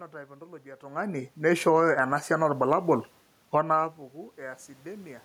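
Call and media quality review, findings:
Automatic gain rising, 1.77–3.12 s, after "ontology etung'ani": AGC ramps about 5 dB. Waveform envelope and room-noise floor swell together; spectrogram brightens evenly across all bands.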